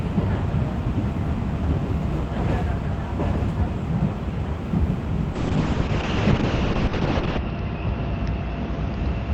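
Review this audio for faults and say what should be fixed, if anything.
A call bitrate drop starts at 5.34 s and lasts to the end of the clip. The sound turns coarse and muffled as the encoder's bit budget collapses, which fits a fall from around 40 kbps to about 6 kbps. The quality bottoms out for roughly 2 s. The coded bandwidth also shrinks from 20 kHz to 8 kHz. On a spectrogram, everything above 8 kHz goes dark, and the remaining content looks smeared and blocky. The waveform itself changes little. To prevent it, give the call enough network headroom, and set a minimum bitrate floor so the encoder cannot drop this far.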